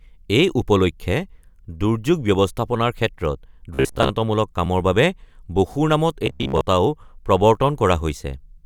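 Robotic sound from repeated short buffers appears from 3.74 to 4.10 s and again from 6.26 to 6.61 s. The speech collapses into a stiff metallic buzz near 66.7 Hz that still loosely tracks the words. That pitch fits a roughly 15 ms stretch of audio being looped, most likely because fresh data arrived too slowly and the gap was filled by repetition. About half the first passage is repeated material, and most of the second.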